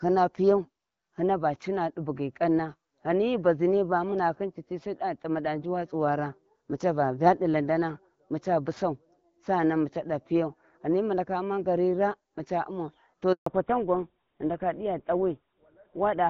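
At 13.32 s, right after "umau to", a handover gap silences the line for 140 ms. The speech dies within a few tens of milliseconds and nothing returns until the new link starts. Unlike scattered packet loss, it is one clean hole, and the audio after it sounds different.

From 13.46 s to the end, a fallback to narrowband removes everything above 4 kHz, so the speech turns dull and rougher. The earlier wideband section reaches higher and sounds like 12.65 kbit/s AMR-WB. The later section's hard 4 kHz ceiling and harshness point to GSM full rate. This is a change of codec, not a mere filter or bitrate dip.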